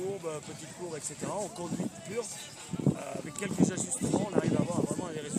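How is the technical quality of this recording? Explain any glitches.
One glitch stands out. A corrupt frame was decoded at 2.40 to 2.42 s: flipped bits in a single compressed frame were played anyway, scattering energy into the wrong frequencies in a brief glitch at about -30 dBFS.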